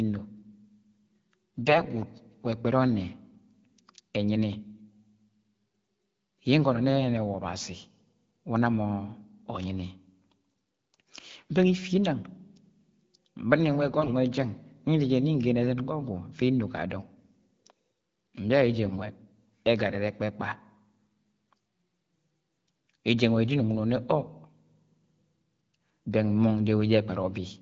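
AMR bit errors at 1.62 to 1.84 s, 13.86 to 14.10 s and 18.86 to 18.96 s: a few percent of flipped low-priority bits misplace excitation pulses, so the speech turns hoarse and gargly at steady level, with harmonics smeared into grainy noise on a spectrogram.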